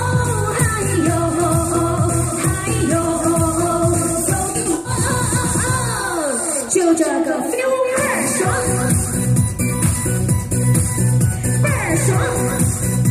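At 4.5 to 4.9 s and again at 7.41 to 7.59 s there's AAC frame loss with concealment. The decoder patched gaps by reusing the last good spectrum, so both spots go smeared and phasey. The first is longer, with a dropout around a tenth of a second.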